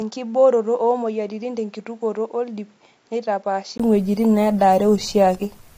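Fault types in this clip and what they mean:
Input switched to a poorer device: until 3.8 s the spectrogram shows nothing above 7.6 kHz and the waveform sits about 10 dB lower, likely from a poorer input, then a 20 ms gap.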